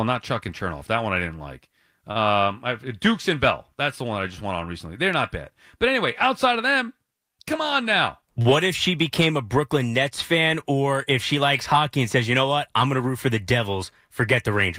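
Short stall from a late packet at 2.11 to 2.17 s, just after "one I didn't like": a packet arrived late, the jitter buffer ran dry, and the receiver held the last sound for 38 ms before resuming where it left off. Nothing is lost, but the speech briefly drags with a faint buzz or dip.

Jitter buffer speed-up from 7.57 to 8.39 s, just before "if she became a": surplus buffered audio was trimmed by cutting out pitch-period-length slices, about 40 ms in all. The speech runs at 104% speed at unchanged pitch.

A second short stall from a late packet follows at 8.42 to 8.51 s, also just before "if she became a", holding the sound for 34 ms.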